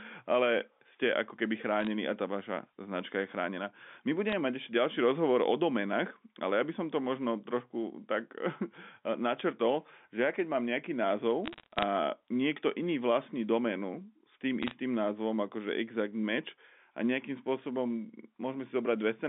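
Bit errors on a digital phone line occur at 1.81–1.87 s (after "ale ste ako keby", before "a tá vaša značka"), 4.29–4.33 s, 11.46–11.83 s (between "mám nejaký" and "niekto iný vlastní doménu") and 14.63–14.73 s (after "vlastní doménu s tým"). At an error rate of a few tenths of a percent, flipped bits in the G.711 mu-law stream corrupt single samples. Where a sign or high-order bit is hit, the sample jumps sharply, producing brief ticks and crackle over the speech. The longest burst, around 11.5–11.8 s, hits the most frames, 20.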